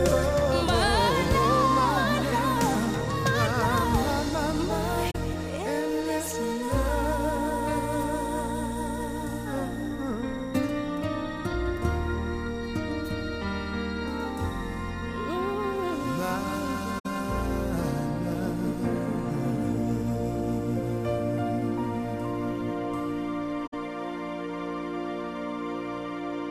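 At 5.10 to 5.16 s, 16.98 to 17.06 s and 23.66 to 23.74 s the sound briefly vanishes, gaps of about 43 ms and then 64 ms twice, which fits two and three lost AAC frames. This is AAC frame loss with muting: the decoder zeroes the missing spectrum, and the overlapping transform windows fade the sound down and back up. Unlike a hard sample dropout, each hole has softened edges.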